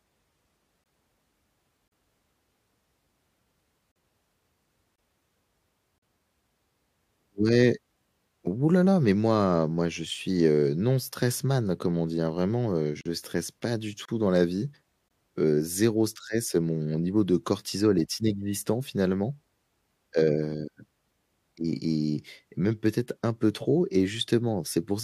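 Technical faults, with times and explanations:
0.84, 1.88, 3.92, 4.96, 5.98, 13.01, 14.05, 15.08 s: gap between stream segments. Hard-edged silent holes of 20 to 43 ms fall on one-second segment boundaries, as around "stresse pas du". Segment timestamps leave small gaps that the player fills with silence. Nothing is lost.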